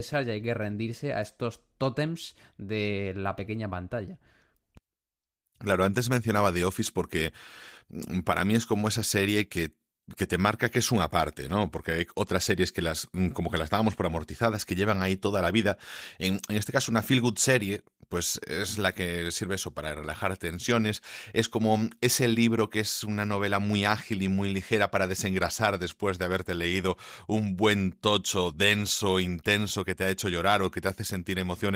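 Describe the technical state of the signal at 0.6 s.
At 0.6 s the speech is intact, with no dropout, click, distortion or other fault, and the Opus voice compression shows only light coding damage there.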